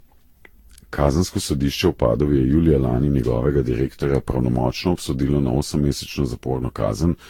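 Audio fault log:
Throughout: generation loss. Speech sounds swirly, smeared and hollow, with blurred consonant attacks and nothing above 18.4 kHz. This likely comes from about ten successive lossy re-encodes, each requantising on a shifted frame grid so that noise and spectral holes accumulate, consistent with Vorbis near 70 kbit/s.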